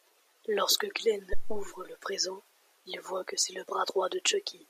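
At 1.33 s a supply is switched on or off on the live input, and the voltage step passes through the coupling capacitors. The result is a phantom power thump, a deep thud peaking at about −16 dBFS. It decays in about 92 ms and clears by 1.74 s, just before "le présent il voit".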